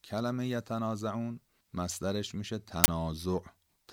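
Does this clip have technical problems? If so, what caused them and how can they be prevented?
Yes. An uninitialised buffer: at 2.84 to 2.88 s in this speech, the playback path handed over a 40 ms block before any audio had been written into it, so whatever stale data sat in that memory was read out as if it were samples. Because those values bear no relation to the surrounding signal, the result is a sudden, loud burst of harsh digital noise lasting the full 40 ms. Preventing it means zero-filling every buffer on allocation and making the output stage wait until each block is confirmed written before it plays.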